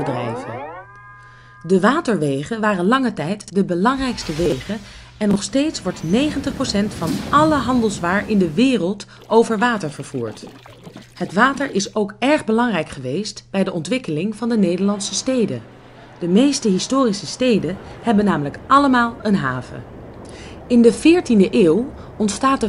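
Chunks out of order occur three times: at 3.41 to 3.50 s, 4.46 to 4.52 s and 5.31 to 5.36 s. In each, a short block of audio about 21 ms long plays three, two and then one block later than it should. Nothing goes missing, but each shuffled stretch is heard as a brief jumbled stutter.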